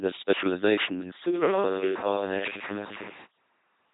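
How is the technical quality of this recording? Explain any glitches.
The technical quality is poor, with heavy coding damage throughout and one stretch that abruptly changes character.

Throughout: the speech buzzes and sounds mechanical and robotic, with nothing above 3.8 kHz. This is the LPC-10 vocoder, which fits a 2.4 kbit/s coder rebuilding each moment from a simple filter driven by either pulses or noise.

From 1.27 to 3.24 s, right after "this specialization is": the voice turns suddenly hollow and roomy, about 5 dB quieter, with room noise about 20 dB below the speech. This likely comes from a switch to a distant microphone that picks up more of the room than the close one.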